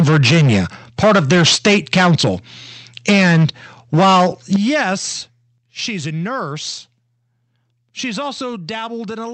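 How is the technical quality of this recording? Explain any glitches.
The recording is rough in the first half, with repeated distortion and sudden level drops.

Microphone overload at 0.0–0.6, 1.03–2.29, 3.08–3.46, 3.93–4.27 and 4.54–4.82 s: peaks run about 9–12 dB past the converter's limit (only about 3 dB in the last one), so the tops get sliced off, likely from an input volume that's set too hot. That gives loud syllables a harsh, crackly edge.

Microphone volume stepped down at 3.1, 4.56 and 5.58 s: the level drops by about 2, 9 and 6 dB in single jumps, most likely the call software cutting the input gain in response to clipping. The first two land inside distorted stretches.

The audio also passed through an Opus call path, which fits the band stopping around 8 kHz.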